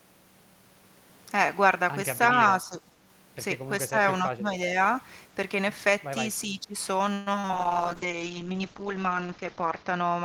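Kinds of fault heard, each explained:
Speech suppressed in double talk: At 2.49–2.81 s, 3.89–3.96 s, 4.23–4.75 s and 6.47–6.75 s the voice sags and thins, by about 5 dB at first and up to about 15 dB later. The likely cause is an echo canceller unable to tell its own talker from the overlapping loudspeaker echo and turning everything down.
Repeated packet loss (robotic sound): From 7.13 to 7.54 s, successive holes, the longest 130 ms, leave about half the stretch patched by stretching the last sound forward. The result is choppy speech with pieces missing.
Jitter buffer slow-down: Between 7.38 and 8.19 s the receiver repeats tiny slices of waveform to rebuild its reserve. This adds 67 ms, so the speech runs at 92% speed, drawn out, while its pitch stays the same.
Call bitrate drop: From 7.55 s to the end the encoder starves for bits, which fits a fall from 32 to 8 kbps. The top end is cut from 20 kHz to 8 kHz, leaving coarse, watery, muffled speech that stays at its worst for about two seconds.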